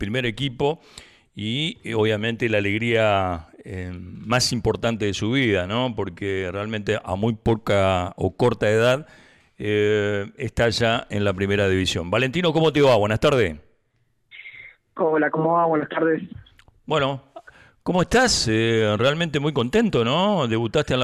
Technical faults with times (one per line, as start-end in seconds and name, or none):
none